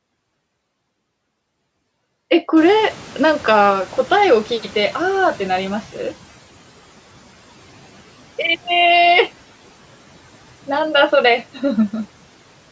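Noise suppressor catching up, 2.56 to 6.15 s: room noise jumps around 2.5 s, passing through with less reduction until the lagging estimate adapts and cuts about 9 dB.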